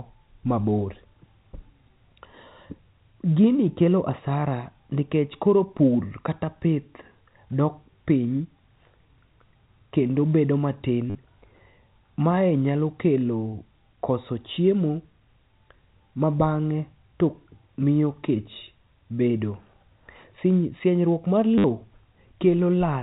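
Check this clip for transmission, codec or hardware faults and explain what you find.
Two short dropouts hidden by packet repetition are present. At 11.10 s, just after "kendo bedo matin", and at 21.58 s, lasting 50 ms and 60 ms, packet loss with last packet repeated makes the receiver replay the previous chunk, giving a robotic stutter. The waveform shows identical repeating segments with abrupt steps, and the spectrogram shows evenly spaced vertical click lines near 100 Hz, which fits 10 ms packets.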